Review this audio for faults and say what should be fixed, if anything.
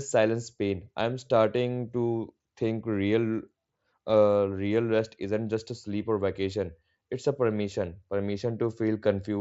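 Nothing stood out on listening to this speech through the Bluetooth mSBC headset path, so there is nothing here that calls for a fix.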